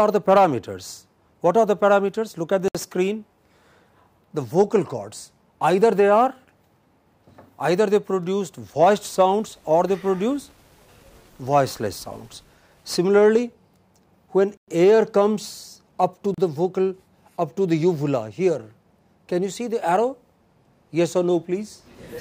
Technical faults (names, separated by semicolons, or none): Bluetooth stall